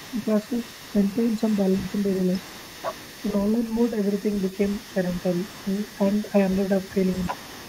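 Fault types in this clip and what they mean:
overdone noise removal: The noise reduction was pushed too hard, so bands near the noise estimate get pulled down or out along with quiet parts of the speech. Across the whole clip the background sits near silent with little twinkling specks.
other side's voice leaking through: From start to finish there's a second voice under the talker, sitting roughly 20 dB down. It's likely loudspeaker echo from the far end that the echo canceller didn't fully clear from the microphone, so it rides along faintly the whole way.
speech suppressed in double talk: Around 7.3 to 7.4 s the talker's voice briefly dips, by something like 15 dB at its deepest, for about a tenth of a second. That's likely the echo canceller getting confused with both sides talking and turning everything down.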